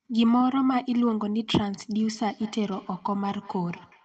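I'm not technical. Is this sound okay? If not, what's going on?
No. From about 1.99 s to the end of the speech there is feedback echo between two devices: a second device in the room replays the call, and the microphone catches it again. Faint repeats come back roughly every fifth of a second, growing thinner and more ringing, unlike natural room echo.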